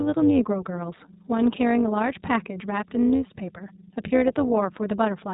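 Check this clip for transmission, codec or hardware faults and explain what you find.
Two faults run through the whole of this speech clip: an overlap-add ripple and iLBC codec damage.

The overlap-add ripple is present from start to finish. The audio was split into windowed frames and rejoined with an overlap whose windows do not add up to a constant gain, so the level swells and dips once per frame. Here the dips reach about 11 dB at a rate of around 200 Hz. A modulation that fast doesn't register as a slow pulsing. It fuses into a metallic buzz with extra tones around each sound.

The iLBC codec damage is also continuous and plainly audible. iLBC is a narrowband VoIP codec that codes each frame's excitation on its own, without drawing on the previous frame. The frame structure here points to 20 ms frames, which fits the 15.2 kbps mode. Nothing above 3.8 kHz survives, so sibilants and consonant detail are dull and telephone-like, and the voiced sounds carry a grainy, slightly synthetic texture from the coarse excitation coding.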